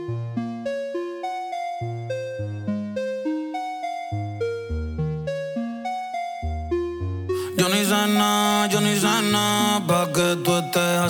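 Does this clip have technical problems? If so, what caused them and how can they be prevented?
No, the signal holds steady and intact throughout, with nothing in its level, continuity or timing that points to a technical problem, so there is nothing here that needs preventing.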